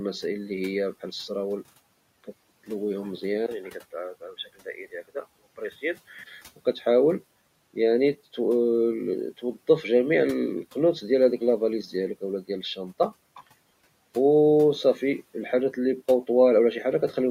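At 3.46 s the input was likely switched to a poorer device, and the band narrows until 6.26 s. After a 20 ms gap the speech turns dull and boxy, drops a few decibels, and picks up a faint new noise floor of its own.

Inside that stretch, between 4.66 and 5.16 s, the noise suppressor mistook parts of the speech for background and pulled them down by as much as about 14 dB. Roughly a tenth of a second in all sounds swallowed and faint.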